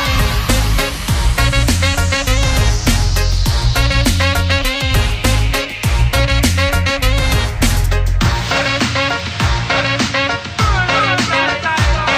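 From 7.86 s to the end, the sound shows channel delay (comb filtering). One channel lags the other by only a couple of samples, about a twentieth of a millisecond, and when the two are folded to mono the shared content cancels where the offset reaches half a cycle. With a delay this short, the first notch falls around 10 kHz, so the top end turns dull while the lower range is unaffected.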